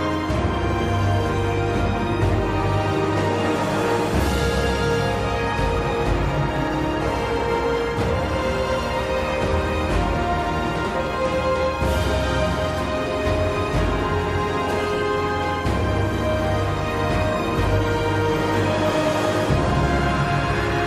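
Computer activity noise runs throughout. A faint buzz pulsing near 1 kHz sits roughly 35 dB below the sound. Processor or graphics load is disturbing the shared audio ground.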